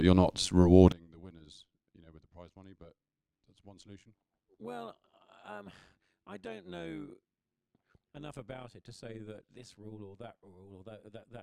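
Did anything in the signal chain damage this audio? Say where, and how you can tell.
Yes. Overlap-add ripple runs through the whole clip. It comes from a processing stage where the speech was split into windowed frames and rebuilt with an overlap whose windows don't sum to a steady gain. The level pulses about 11 dB once per frame at around 100 Hz, so the speech carries a metallic buzz with extra tones around each note rather than a clean envelope. The ripple is at the frame rate, not in the speech itself.

One channel inverted starts at 0.92 s, just after "you're not", and lasts to the end at 11.42 s. The speech suddenly drops about 26 dB and turns faint. That collapse is what happens when matching left and right content cancels in a mono sum. The likely cause is a polarity flip on one channel in the wiring or a mixing stage, leaving only the small difference between the channels.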